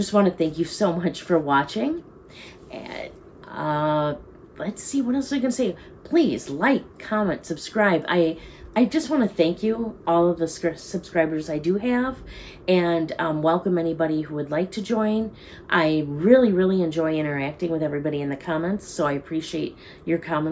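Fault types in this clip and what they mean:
No technical faults can be heard anywhere in this audio. There is nothing to list under any fault type for this clip.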